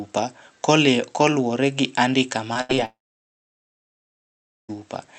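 A short concealed packet loss comes first, at 2.53 to 2.57 s, just after "koluwore gi andika". About 20 ms of the stream failed to arrive in time, and the receiver bridged the hole by extending the preceding sound before blending back into the real signal. It is heard as a brief smear or wobble rather than a clean cut.

A burst of packet loss follows at 2.61 to 2.71 s, still just after "koluwore gi andika". Roughly 80 ms went missing in a row. The decoder kept the last sound going and turned it down as the gap continued, so it comes out as a short held buzz or fading hiss. The audio then picks up further along, with that stretch simply absent.

A second short concealed packet loss sits at 2.75 to 2.79 s. Another 20 ms hole was patched by extrapolating from what came before, leaving a small wobble in the band-limited sound, which is cut off at 8 kHz by the call codec.

A long network dropout runs from 2.85 to 4.7 s. 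The last sound is stretched briefly and fades, and then roughly 1.75 s of near-silence follows. The cause is likely a lengthy break in delivery on the network. When the audio returns, about 1.8 s of the original is gone.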